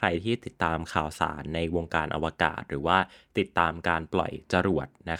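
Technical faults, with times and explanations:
No technical faults can be heard anywhere in the speech; the signal stays intact and steady over its whole duration.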